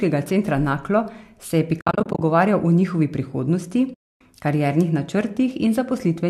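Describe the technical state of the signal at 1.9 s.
AAC frame loss with muting: between 1.81 and 2.21 s, lost frames totalling about 250 ms are scattered across roughly 400 ms. The decoder zeroes their spectrum, so overlapping windows fade the speech out and back in, leaving soft-edged gaps, the longest around 70 ms.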